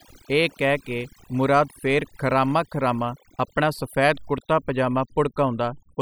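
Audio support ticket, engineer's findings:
Overdone noise removal, present throughout the speech. Background dropped, breaking up into twinkling specks. Noise reduction stage set too strong: bands near its noise estimate cut hard or off, quiet voice detail removed with them.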